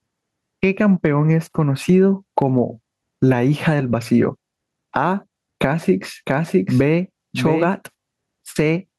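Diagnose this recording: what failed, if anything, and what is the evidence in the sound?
Gain pumping runs through the whole clip, and it sits in the processing stage. The gain swings by around 10 dB. The likely cause is input gain set far too hot, with a fast limiter or compressor slamming it down on every loud syllable. The speech ends up flattened, with loud and quiet passages pushed toward the same level.

From 6.26 s to 7.72 s there's a doubled audio track. A second full-band copy of the speech trails the original by roughly 0.7 s, sitting about 5 dB quieter. There's no reverb tail or room colour on it, so it's the same signal laid in twice, and it cuts in and out abruptly at those edges. That points to the driver/capture or storage stage, most likely a slower second capture path or an edit that left two offset copies overlapping.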